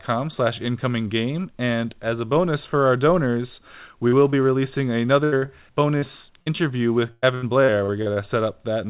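Just after "bonus for our donors", at 4.08 s and again at 4.30 s, the sound briefly smears with a wobble, as if a sliver were stretched over. This is short concealed packet loss: about 40 ms and then 20 ms of the call arrived too late to decode, so the receiver carried the preceding sound forward, pitched or noisy to match it, and blended back into the real signal.

At 5.24 s a longer hole opens. The sound holds as a flat buzz or thinning hiss that fades, then picks up further along with roughly 80 ms gone. This burst of packet loss comes from several consecutive packets missing their playout time. The receiver extended the last sound while lowering its level across the gap, and whatever fell inside it is lost.

The short smears return in quick succession at 5.38, 5.46, 5.98 and 6.42 s, each about 20 to 40 ms of filled-in sound. The mechanism is the same short concealed packet loss: isolated late packets patched by extrapolating what came before.

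From 7.12 to 8.18 s the audio turns choppy, with pieces dropping out. This is repeated packet loss (robotic sound): six gaps in about one second, the longest around 100 ms, so close to a third of that stretch is synthesised rather than received. Each patch repeats the last fragment before the next hole arrives. Throughout, the narrow band with nothing above 4 kHz fits the G.711 call codec.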